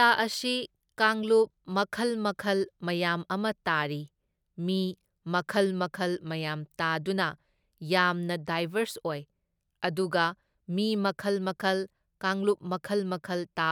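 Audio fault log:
No technical faults are audible anywhere in this speech recording.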